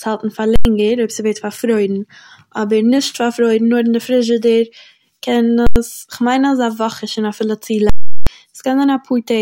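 Three violent bursts cut through the speech: a sharp bang from 0.56 to 0.65 s, another from 5.67 to 5.76 s, and a longer event from 7.90 to 8.27 s, where a loud pop opens a stretch with the speech gone and a second pop closes it. These are invalid numbers at full scale. A calculation went infinite or undefined, and each affected block was pinned at one extreme value. The blocks last about 93 ms, which fits 4096 samples, and 372 ms, which fits 16384.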